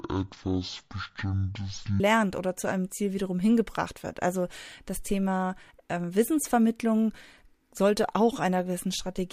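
From 0.0 to 2.0 s, before "oder zu einem", the speech suffers from stereo read as mono: left and right samples are taken one after another as a single channel, so it plays at half speed, an octave low, with a faint mirrored image in the upper spectrum that a plain sample-rate mismatch would not add.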